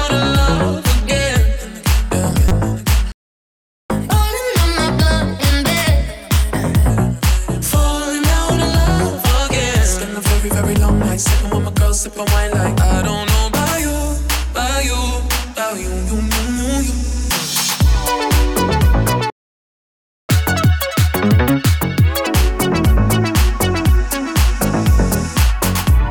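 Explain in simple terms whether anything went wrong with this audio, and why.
A short chirp of noise at 2.48 to 2.52 s is a corrupt frame decoded: a couple of damaged compressed frames were played anyway, putting energy at wrong frequencies.

The sound cuts out from 3.12 to 3.90 s (about 0.78 s) and from 19.30 to 20.29 s (about 1 s). Each is a playback stall, likely from the player running out of data.

After each gap comes catch-up at higher speed. From 3.90 to 6.90 s the audio runs 1.15 times fast, about two semitones higher. From 20.29 to 22.27 s it runs 1.5 times fast, roughly seven semitones higher, as the player rushes its backlog.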